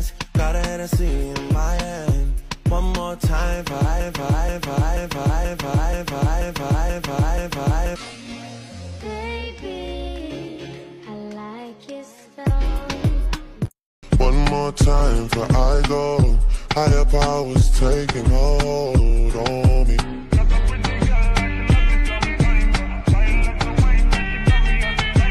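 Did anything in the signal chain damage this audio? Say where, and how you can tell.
Yes. A stage in playback or streaming, most likely a stalled player or stream buffer, stopped taking in new audio and kept sending the last fragment it held. From 4.00 s to 7.96 s this is heard as a broken-record loop: a 0.48 s piece of sound repeats exactly, back to back, eight times. The loop is identical on every pass, and the audio that belonged in those four seconds never arrives.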